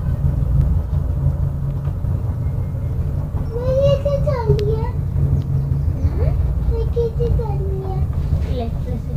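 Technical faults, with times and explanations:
0.61–1.13 s, CD scratch ticks: three short ticks fall in about half a second. The longest lasts well under a millisecond. A scratch or blemish on the disc wipes out more data than error correction can rebuild. The damage returns once per turn of the disc, so the ticks come at a steady spacing. The player fills the gaps by interpolation or mutes them. Either way, the sound briefly breaks, and each break is heard as a tick.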